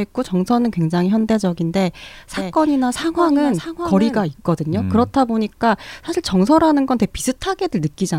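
From 2.33 to 4.23 s, a doubled audio track: a copy about 10 dB quieter trails roughly 0.7 s behind, starting abruptly and, unlike echo, never decaying.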